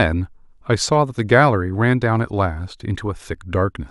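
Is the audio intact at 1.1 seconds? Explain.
Yes, the speech is intact at 1.1 seconds, with no dropout, click, distortion or other fault at that moment.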